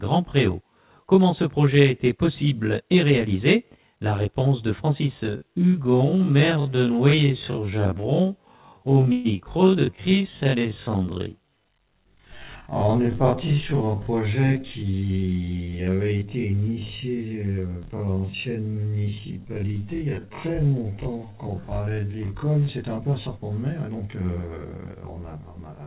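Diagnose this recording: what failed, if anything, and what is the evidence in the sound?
Channel delay (comb filtering), present for the whole 26 seconds. This is an analogue wiring or driver/buffer problem. One channel runs roughly 20 ms behind the other, and the two are summed to mono. Content common to both cancels at evenly spaced frequencies, starting down near 20 Hz, which leaves the sound rough or slightly doubled. Reverb or a room echo would leave a decaying tail. Here the notches stay fixed in the spectrum and never move.

Time-stretched section, from 5.23 to 22.69 s. The pace suddenly drops to about 57% of normal while the pitch stays exactly where it was. That combination points to a storage or editing stage, likely software stretching the audio to fit a length. A slow tape or wrong-rate playback would pull the pitch down with the speed.

Call audio freeze, from 9.12 to 9.27 s. 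The sound holds as a fading continuation of the last sound for about 125 ms and then carries on exactly where it stopped. There is no silence and nothing goes missing, so a gap was inserted rather than audio lost. That distinguishes it from a packet-loss dropout. It is likely a network stall in which the jitter buffer ran empty and the receiver filled the wait with the last sound. Within this call path the band stops at 4 kHz, as narrowband telephone coding would give.

Jitter buffer speed-up, from 14.55 to 14.93 s. The audio briefly runs hurried at about 110% speed with the pitch unchanged, as roughly 40 ms of short pitch-period pieces are cut in quick succession. This is call processing in the jitter buffer, trimming the extra delay built up after held packets arrived together. It differs from the long time-stretch because it is short and goes faster rather than slower.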